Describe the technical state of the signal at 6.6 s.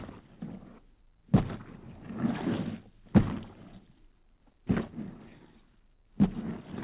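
At 6.6 s the audio is intact, with no dropout, glitch or distortion, and the sound carries the narrow band of a telephone-style call path, with nothing above 4 kHz.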